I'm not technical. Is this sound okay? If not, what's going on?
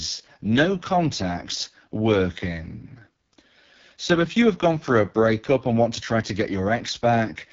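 No. From start to finish the speech has gone through the AMR wideband (HD Voice) codec, the system used for HD mobile calls, squeezed to one of its lowest settings. At that setting the phone rebuilds the speech from a rough model, so it sounds raspy and gritty. Unlike an ordinary old-style phone call, it isn't muffled or boxy, because sound still reaches up to about 7.4 kHz. The problem is roughness, not missing treble.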